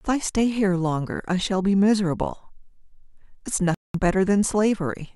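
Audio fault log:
3.74–3.95 s, Bluetooth dropout: audio packets likely arrived too late and were dropped, so the speech cuts to silence for 200 ms, then resumes further along.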